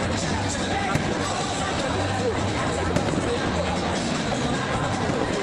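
No dropouts, distortion, glitches or other technical faults can be heard at any point in the audio.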